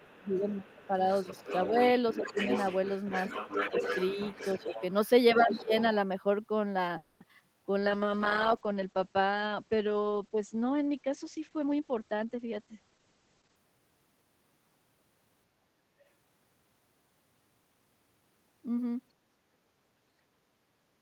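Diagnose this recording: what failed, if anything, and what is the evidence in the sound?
Speech suppressed in double talk, at 0.0–0.93, 1.42–1.75, 2.23–2.38, 3.71–4.15, 4.57–4.75 and 5.39–5.72 s: the near talker dips by up to about 20 dB in the first and last events and less in between. This is likely call processing, where the echo canceller mistook overlapping speech for echo and attenuated both.

Other side's voice leaking through, from 0.04 to 5.1 s and again at 5.49–5.83 s: a second voice sits roughly 10 dB under the talker. This likely comes from residual echo in call processing, with the far end's loudspeaker output only partly cancelled at the microphone.

Call audio freeze, 6.97–7.22 s: the last sound is stretched into a fading fill for 230 ms, then speech resumes with nothing lost, only delayed. This is likely a network stall that drained the jitter buffer until the held packets arrived.

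Short concealed packet loss, 7.28–7.31 s: a brief smear replaces about 20 ms of audio. On the network side, a packet missed its deadline, and the decoder extrapolated from the preceding sound before crossfading back into the real signal.

Skip ahead, 7.39–7.42 s: playback jumps forward with almost no gap, losing roughly 70 ms. A stretch of audio was dropped, in transit or by the jitter buffer, while later audio was already queued, so the two sides of the cut join nearly directly.

Jitter buffer slow-down, 7.47–8.11 s: speech runs at 88% speed with unchanged pitch, drawn out by 84 ms. In the buffer stage, the receiver repeated pitch periods many times to rebuild its reserve.

Call bitrate drop, 7.81–13.64 s: the sound turns coarse and muffled, with the top end falling from about 20 kHz to 8 kHz. The codec was throttled from 32 to 9 kbps after the bandwidth estimate collapsed, and it held there throughout.

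Jitter buffer speed-up, 11.66–12.92 s: speech hurries to 118% speed at the same pitch, shedding about a fifth of a second. The buffer had overfilled, so the receiver trimmed short pitch-period segments repeatedly to bring latency back down.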